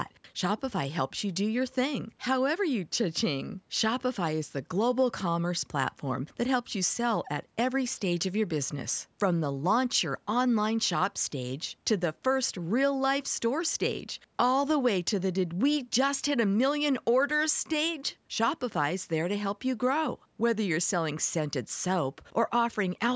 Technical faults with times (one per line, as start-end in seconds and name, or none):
none